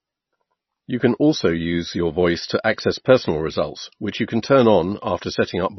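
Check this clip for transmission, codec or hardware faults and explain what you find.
One codec fault runs through the whole speech clip. Nothing is heard above 5.9 kHz, and the sound is watery and swirly. Sibilants chirp metallically, and attacks smear. This is likely MP3 compression, heavily starved of bits, which fits a low bitrate near 24 kbps. The encoder cuts the treble at a fixed point. It drops weak frequency lines, which flicker on and off between frames.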